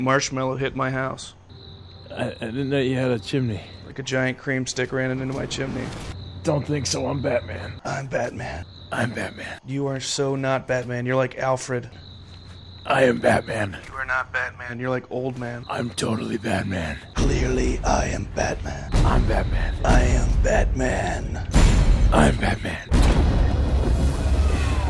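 No technical faults are audible anywhere in this recording.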